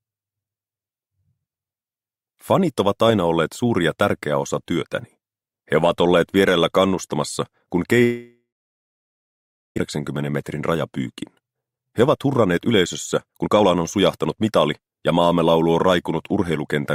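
From 8.03 s to 9.80 s the sound stops: the last moment before the break is stretched into a fading buzz or hiss, then about 1.3 s of silence follows before the audio resumes with a jump. This is most likely a long network dropout. Nothing arrived for that stretch, so the receiver concealed the gap, and one second of the original audio was never played. The stall also left playback running roughly 0.7 s behind.

Three bursts of hurried sound follow, with the pitch unchanged. From 10.33 s to 10.76 s the audio runs at 110% speed. From 11.16 s to 12.72 s it runs at 123%, and from 13.26 s to 15.03 s at 117%. This is jitter buffer speed-up. The buffer held more audio than its target, so the receiver repeatedly cut out pitch-period-sized slivers to reduce the backlog. It removed roughly 50 ms, 400 ms and 300 ms in the three bursts.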